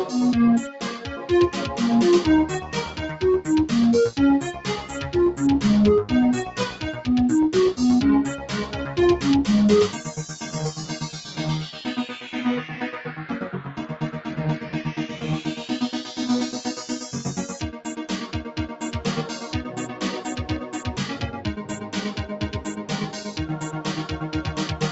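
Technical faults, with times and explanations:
0.95 to 1.27 s, sound cut by the noise suppressor. The suppressor mistook this sound for noise. Its level sinks by up to about 5 dB.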